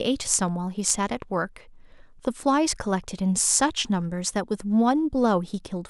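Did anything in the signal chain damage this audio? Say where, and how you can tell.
Yes. At the driver or buffer stage, the capture side likely failed to collect samples before the hardware overwrote them, a dropped buffer (overrun). At 0.9 s and 2.43 s the speech skips ahead with no silence, losing roughly a hundredth of a second, then about half that.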